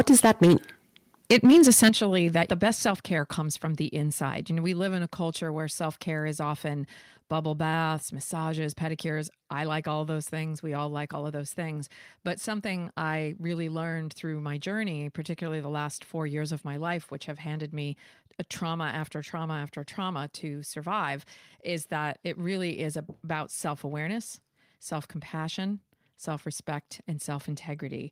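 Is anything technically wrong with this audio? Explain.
Yes. From 0.00 to 0.55 s and again from 1.30 to 1.89 s the loudest syllables turn harsh and crackly, with flattened tops. This is likely microphone overload: input running about 9 dB past the converter's ceiling, cutting off roughly a tenth, then a sixth, of samples.

At 1.89 s, right after the second distorted stretch, and again at 2.91 s, voice and background drop abruptly together, by about 9 dB and then about 5 dB. This points to the microphone volume being stepped down, likely by call software reacting to the clipping.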